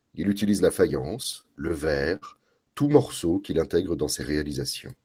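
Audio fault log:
1.23–2.25 s, repeated stalls (stutter): packets reached the receiver late or more slowly than they were played out, so the jitter buffer drained seven times within this second of speech. At each stall the receiver stretched the last sound to bridge the wait, about 141 ms in all and roughly 14% of the span, the longest single hold 54 ms. Nothing is lost, but the speech drags and hiccups unevenly.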